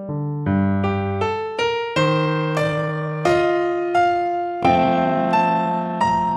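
Software likely stretched the audio from 2.04 s to the end to 0.54 times speed, holding pitch. This time-stretched section turns slow and drags.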